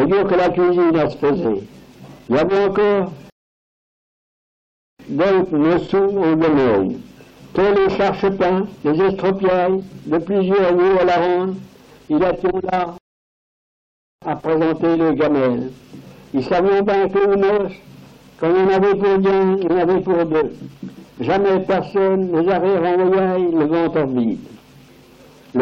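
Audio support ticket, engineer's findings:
Rebuffering stall, twice. Silence at 3.30–4.99 s and 12.98–14.22 s, adding 1.69 s and 1.24 s. Audio resumes exactly where it stopped, with nothing lost. Player buffer underrun: download fell behind playback, and output halted until data arrived.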